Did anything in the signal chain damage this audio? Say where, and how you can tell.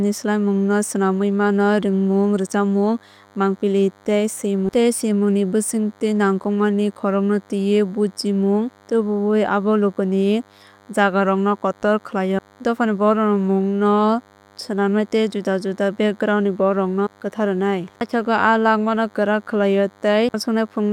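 Yes. The analogue stage picked up DECT cordless phone buzz. A DECT handset or base nearby transmits a brief radio burst every 10 ms, and some junction in the microphone wiring or preamp rectified that RF into audio. The result is a thin, steady buzz at 100 Hz with a dense stack of harmonics, running through the whole speech clip, sitting well below the talker.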